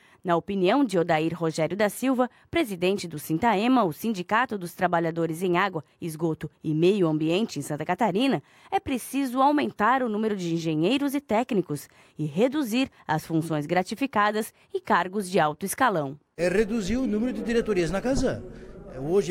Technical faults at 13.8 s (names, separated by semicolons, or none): none